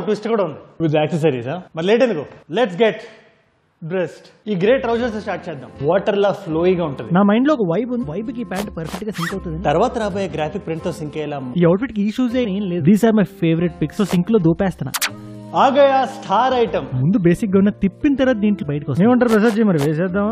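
Short blips break through the audio at 8.00 to 8.05 s, 12.44 to 12.46 s and 18.61 s. This is damaged data in the compressed stream: corrupted bytes make the decoder misread those frames, lose sync and hunt for the next valid frame header.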